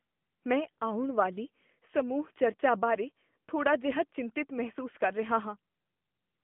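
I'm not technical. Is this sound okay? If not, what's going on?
No. From start to finish the speech sounds thin, boxed-in and buzzy, like an old mobile call. That is the AMR narrowband mobile codec: it keeps only roughly 150 Hz to 3.4 kHz and rebuilds the voice from a simplified model, leaving clearly audible damage.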